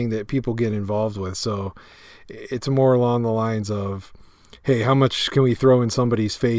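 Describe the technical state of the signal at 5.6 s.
At 5.6 s the speech signal is intact, with no audible fault at that moment.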